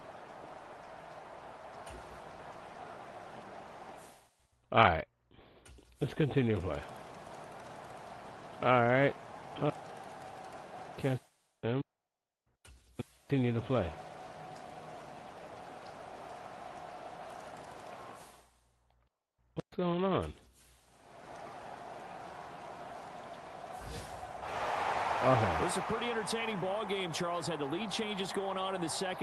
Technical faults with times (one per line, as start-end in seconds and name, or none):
none